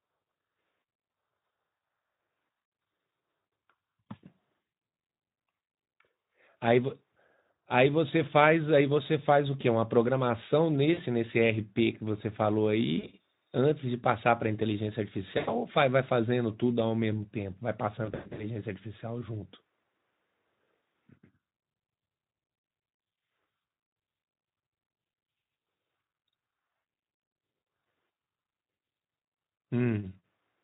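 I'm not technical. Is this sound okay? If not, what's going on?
No. Pieces of this call went missing in transit, a fault called VoIP packet loss concealed by the speech codec. When pieces vanish, the speech codec guesses the missing sound by stretching what it last heard and fading it out. The speech briefly turns buzzy or smeary, then sounds weak for a moment after it recovers. This happens around 1.11 to 1.13, 10.93 to 11.02, 12.99 to 13.10, and 15.37 to 15.55 seconds, and worst in a broken patch from 18.05 to 18.45 seconds.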